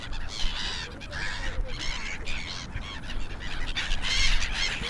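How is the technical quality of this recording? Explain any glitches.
Nothing here calls for an explanation: the recording holds steady the whole way, with no glitches, dropouts or other technical faults to point to.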